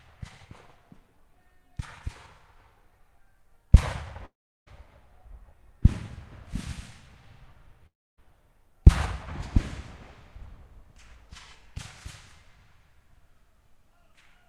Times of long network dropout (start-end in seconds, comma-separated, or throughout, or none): 4.25-4.68, 7.86-8.19